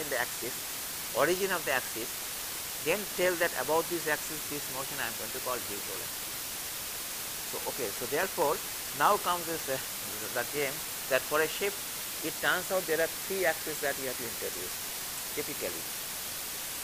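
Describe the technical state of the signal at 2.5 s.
A constant, even hiss sits almost level with the sound itself at 2.5 s, as it does for the whole clip, with no crunch or distortion. This is low bit depth with dither: the signal is rounded to just 5 bits, and the added dither turns that rounding error into steady white noise.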